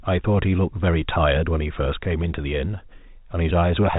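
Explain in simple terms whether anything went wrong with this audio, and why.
Nothing went wrong with this speech recording. It comes through ordinary G.711 telephone coding, which is why nothing above about 3.8 kHz is heard and the voice has that familiar narrow phone-line sound.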